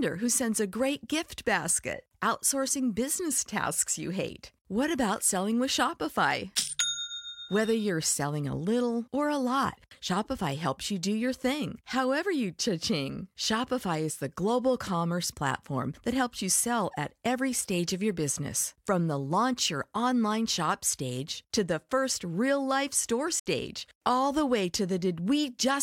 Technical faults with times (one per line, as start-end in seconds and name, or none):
23.39-23.46 Bluetooth dropout